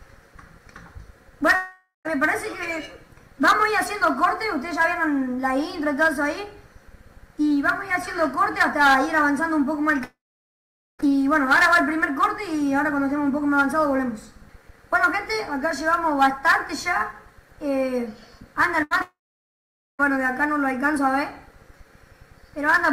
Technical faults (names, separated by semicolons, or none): long network dropout; burst of packet loss; short concealed packet loss